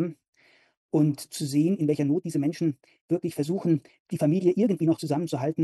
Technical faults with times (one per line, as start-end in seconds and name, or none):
1.64-5.64 time-stretched section